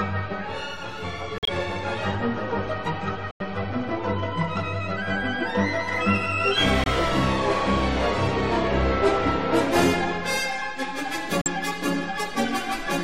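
Corrupt frames muted at 1.38–1.49 s, 3.31–3.42 s, 6.84–6.87 s and 11.41–11.47 s: damaged compressed frames were rejected by the decoder and replaced with silence. The holes start abruptly and last whole multiples of a roughly 28 ms frame. Timing is not shifted, and nothing fills the gaps.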